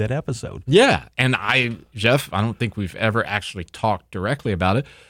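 A recording of speech, with nothing technically wrong with it.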